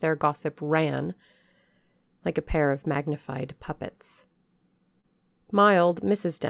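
At 4.33 to 4.37 s there is a short stall from a late packet. The jitter buffer ran dry, so the receiver stretched the last sound for about 24 ms until the packet arrived, then resumed with nothing lost. It is heard as a briefly held sound with a faint buzz, and the playout delay grows by 24 ms from that point on.

At 5.01 to 5.05 s comes a short concealed packet loss. About 20 ms of audio never reached the decoder in time. The gap was filled with roughly 22 ms continued from the preceding sound and blended back in, producing a brief smear within the narrowband G.711 signal, which carries nothing above 4 kHz.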